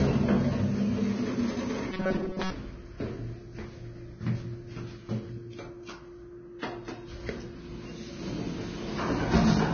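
Heavy Vorbis compression damage runs through the whole clip, likely from encoding at a very low bitrate of around 19 kbps. Nothing sounds above 6.5 kHz, and the remaining treble is hissy and grainy, with blurred attacks. A spectrogram shows a hard ceiling at 6.5 kHz and speckled, noisy upper bands.

From 1.92 to 2.54 s, robotic sound from repeated short buffers turns the audio into a rigid metallic buzz at 188 Hz. A stall was likely filled by looping a slice of about 5.3 ms while most of the real audio was skipped. The waveform repeats one short cycle, and the spectrogram shows evenly spaced harmonics of 188 Hz.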